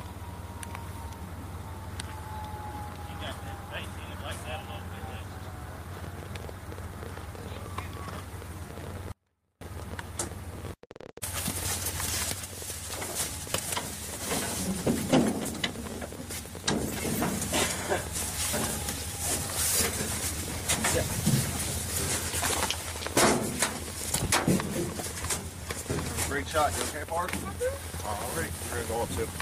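At 9.12 s the sound drops abruptly to a faint residue for about 0.49 s, likely a signal dropout with the path still live. A weak trace remains, far below normal level.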